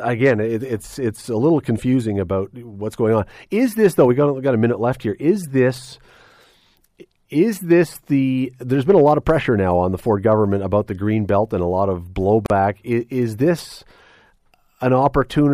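A speech clip with one gap at a join of encoded pieces: a 38 ms gap from 12.46 to 12.50 s, just before "is is this". Unlike a dropout, nothing is lost; the sound resumes where it stopped, edges smeared, as separately encoded pieces keep their encoder delay and padding.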